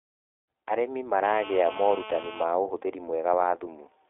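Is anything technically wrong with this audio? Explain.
Yes. Throughout, the iLBC codec leaves the speech plainly rough and synthetic. Each 20 ms frame is coded independently, and a spectrogram shows nothing above 3.8 kHz.

From 1.25 to 2.44 s, GSM phone buzz appears as a steady, raspy 217 Hz tone at about 12 dB below the speech. Rectified radio bursts produce it, and they show as evenly spaced harmonic lines and regular waveform spikes.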